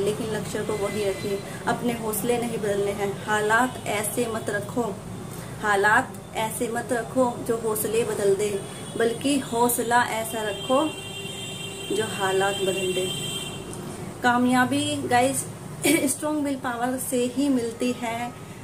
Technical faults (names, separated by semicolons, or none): none